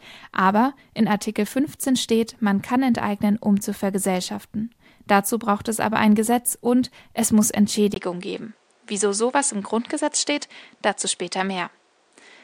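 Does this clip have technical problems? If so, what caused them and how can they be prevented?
Yes. Right after "und es muss", at 7.94 s, there's a 20 ms gap, then the sound turns duller until the end, with nothing above 9.5 kHz and faint new background noise roughly 40 dB down at the same level. That's likely the input switched to a poorer device. Lock the input device before recording.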